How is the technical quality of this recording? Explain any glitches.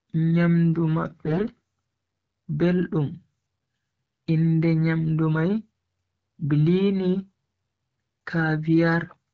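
The speech has two short glitches, both AMR bit errors. From 1.26 to 1.46 s, and again from 3.59 to 3.65 s, the weak bits in the AMR-WB frames arrived flipped while the checksum on the key bits still passed. That misplaced the excitation pulses and skewed pitch, gain and spectral detail. Level and pitch hold, but the sound turns hoarse and gargly. The first burst is worse, with about a tenth of bits wrong against a few percent. The wideband coding itself sounds consistent with roughly 12.65 kbit/s.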